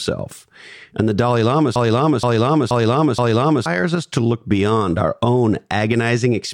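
Something upstream, likely a stalled player, encoder or stream, stopped delivering fresh audio and kept resending the last fragment it had buffered, producing a broken-record loop from 1.76 s to 3.66 s. A slice of speech about 0.48 s long plays four times back to back with identical timing and tone, giving a mechanical stutter. Whatever should have been heard during those roughly two seconds is gone.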